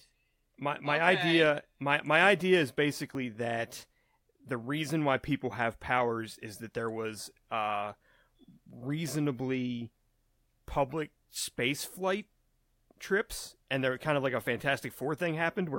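At 3.15 s in this speech clip, between "my my idea is" and "that the reason why", the sound makes a small jump forward, with no gap of silence. This is likely a dropped buffer (overrun): roughly 20 ms of samples were overwritten before being read, and the audio on either side was spliced directly together.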